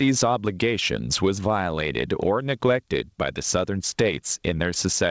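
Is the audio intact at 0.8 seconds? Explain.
No. Gain pumping runs through the whole clip, including 0.8 s. The level is likely being driven far too hot into a fast limiter that clamps down on each loud sound, so the gain swings by around 15 dB, leaving the speech squashed.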